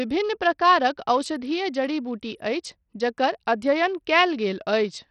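A speech recording with band-limited, gritty audio from start to finish. Nothing remains above 10.4 kHz, the upper treble flickers in and out, and coarse quantisation noise with aliasing rides on the sound throughout. The likely cause is Bluetooth SBC compression with a small bit pool. The weak top sub-bands get few or no bits, and the remaining bands are quantised crudely. The heavy damage is consistent with a low bitrate of around 64 kbps.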